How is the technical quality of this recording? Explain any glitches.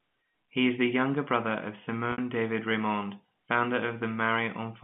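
One dropout is audible, on a narrowband telephone-quality line consistent with G.711 A-law coding, with audio confined to about 150 Hz to 3.5 kHz.

Packet loss with pitch repetition occurs at 2.12 to 2.18 s, just after "the younger brother of". About 60 ms of audio went missing, which fits three 20 ms packets. The receiver filled the gap by repeating the last pitch period, heard as a brief held, buzzy tone that fades out before the speech resumes through a short cross-fade.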